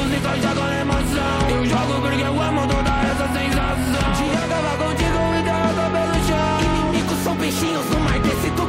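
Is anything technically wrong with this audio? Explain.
No, nothing technically wrong is audible in this audio.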